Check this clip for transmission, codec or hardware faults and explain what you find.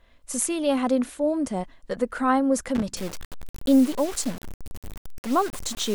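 Two faults stand out in this speech clip. From 2.75 to 2.83 s there's a short loose connector crackle: a dirty contact making and breaking, chopping the signal into a scratchy, irregular burst. From 2.97 s to the end, the speech turns grainy, with the grit tracking the sound and noise roughly 15 dB under it. That's likely low bit depth without dither, consistent with about 5 bits truncated rather than dithered.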